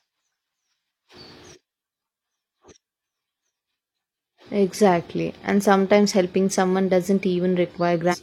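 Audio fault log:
8.09–8.16 s, damaged data in a compressed stream: a brief disturbance where the decoder misreads corrupted frames and resyncs.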